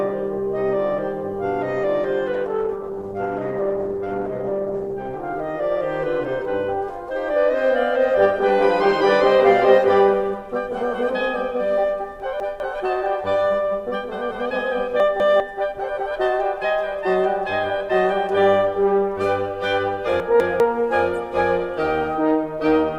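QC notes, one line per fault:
2.35–5.29 s, call bitrate drop: the music turns coarse, watery and dull, which points to the encoder being pushed from about 48 kbps down to about 14 kbps. The low rate holds for roughly 2.9 s. On a spectrogram the upper band is cut off flat and the remaining energy looks smeared and blotchy until full bandwidth returns.
12.2–12.6 s, 15.0–15.4 s, 20.2–20.6 s, chunks out of order: in each case a 200 ms chunk arrives one chunk late and plays after the chunk that should follow it, so the music briefly jumps forward and then back. Each swap leaves three hard joins. On the waveform these show as sharp discontinuities at 200 ms spacing, and the spectrogram shows vertical lines where the musical content breaks.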